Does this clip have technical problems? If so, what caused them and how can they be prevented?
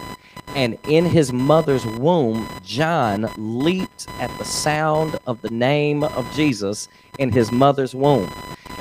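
Yes. Computer activity noise: processor and peripheral load shifts the shared audio ground, adding a buzzing chirp near 1 kHz, roughly 15 dB under the speech, throughout. Isolate grounds, for instance with an external USB interface or ground-loop isolator.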